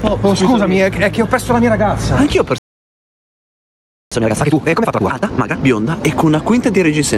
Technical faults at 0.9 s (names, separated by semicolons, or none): gain pumping